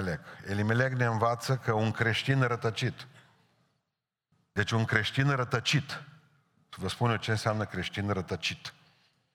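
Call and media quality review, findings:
No audible faults found in this speech recording.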